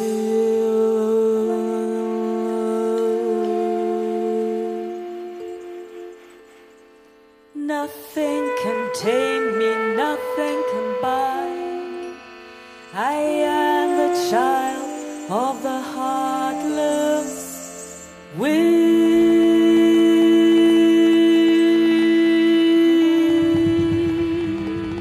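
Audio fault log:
19.06–24.99 s: train of clicks, around forty uneven pops at about 6.6 per second, roughly as loud as the sound, likely from electrical interference or a faulty connection or power supply.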